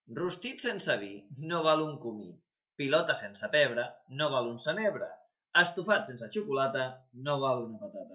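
Speech, with nothing technically wrong to point to at any time.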